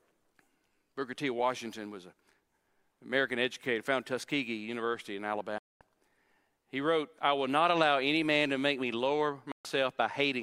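A digital broadcast dropout occurs at 5.58 s, when the speech fades to silence within about 3 ms and stays muted for about 0.22 s before returning at 5.81 s. A second, shorter dropout mutes the audio from 9.52 s to 9.65 s, about 0.13 s. In both, the receiver stopped getting usable frames and muted until valid ones arrived. The gap lengths fit whole frames of about 32 ms being discarded, and the speech sent during each hole is lost.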